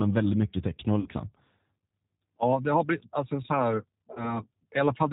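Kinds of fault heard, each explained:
G.729 codec: The speech was carried by a low-rate model-based codec, which fits an 8 kbit/s G.729A stream, rebuilding it from a filter, pitch predictor and sparse pulses. It sounds plainly rough and synthetic throughout, with nothing above 4 kHz.
VoIP packet loss concealed by the speech codec: Packets went missing and the decoder filled the gaps by extending its last pitch and filter at falling gain. Around 1.00 to 1.10 s, about 60 ms of lost audio, which fits two packets, becomes a fading, stretched smear. At 4.13 s about 30 ms, likely a single packet, is concealed, and the speech stays weakened until about 4.41 s.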